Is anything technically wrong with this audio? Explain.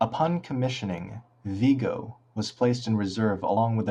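Yes. Compressed frames skipped at 3.57 s: about a tenth of a second of speech vanishes, which fits roughly three dropped 32 ms frames, so the audio jumps ahead at that point.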